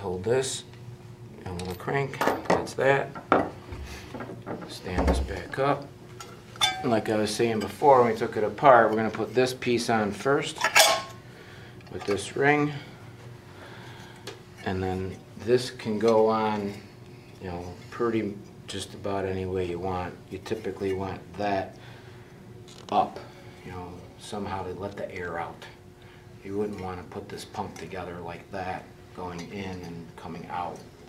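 Nothing in the audio points to a technical fault: the signal runs without interruption, level problems, or audible processing damage at any moment.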